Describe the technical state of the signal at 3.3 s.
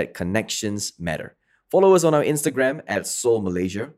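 Channel delay (comb filtering) is present at 3.3 s, within a stretch running from about 2.49 s to the end of the clip. One channel arrives roughly 10 ms after the other, and when the two are summed to mono, the shared content cancels at evenly spaced frequencies. The first notch sits around 50 Hz, with further notches repeating up the spectrum, so the speech there sounds hollow and phasey, with a fixed colouration.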